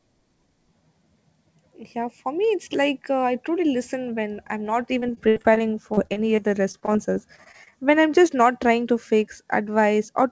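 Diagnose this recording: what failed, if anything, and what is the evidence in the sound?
Repeated packet loss on the network leg: from 5.00 to 7.74 s, concealment keeps stretching the last sound over frequent gaps, leaving choppy, robotic speech with pieces missing.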